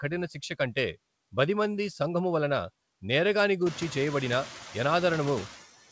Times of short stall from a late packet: none

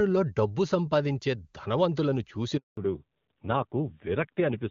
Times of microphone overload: none

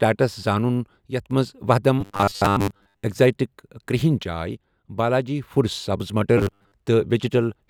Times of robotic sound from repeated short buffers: 2.01-3.04, 6.38-6.73

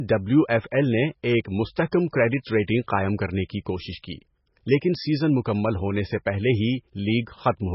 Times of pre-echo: 1.91

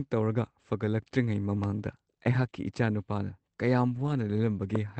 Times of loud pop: 1.64-1.66, 4.75-4.78

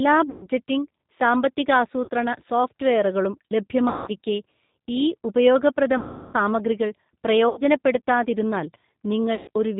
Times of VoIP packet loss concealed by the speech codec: 0.30-0.47, 2.04-2.09, 3.89-4.11, 5.98-6.36, 7.49-7.61, 9.35-9.49

